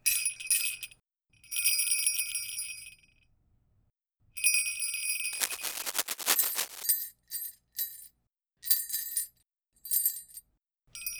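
From 5.33 s to 6.83 s, cable scratch noise appears. Dense, uneven bursts of scratching and rustling run over the audio, roughly as loud as the sound itself. A worn cable or connector being moved is the likely cause, its contact resistance changing rapidly.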